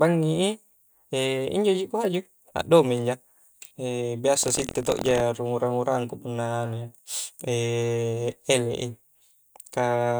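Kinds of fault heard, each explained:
Buffer tearing: from 4.41 to 5.22 s the speech takes on a rough, robotic rattle at about 43 Hz, which fits a 1024-sample buffer. The writing program and the playback hardware have drifted so that they cross within each period. A small slice of every buffer, around 7 percent, still holds sound from roughly a tenth of a second earlier, spliced in with hard edges on both sides. This repeating discontinuity produces the steady buzz, which rides only on the speech.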